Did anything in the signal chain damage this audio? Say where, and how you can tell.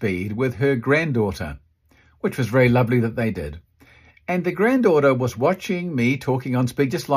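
No, nothing in this speech recording stood out as damaged on listening.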